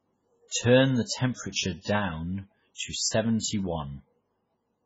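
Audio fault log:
Throughout, MP3 compression: nothing above 7.7 kHz, and the speech sounds watery and swirling. This likely comes from a bitrate near 16 kbps starving the encoder.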